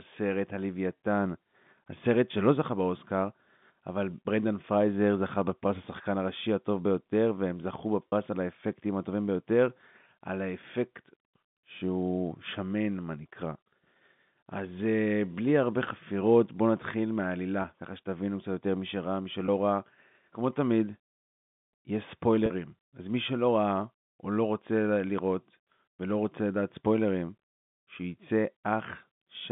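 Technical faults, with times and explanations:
8.09–8.12 s, 17.62–17.64 s, 19.46–19.48 s, 22.46–22.50 s: packet loss with pitch repetition. Gaps of 40, 20, 20 and 40 ms are filled by a repeated pitch period. Each sounds like a brief buzzy held tone, not a silent dropout or click, which fits one or two lost 20 ms packets.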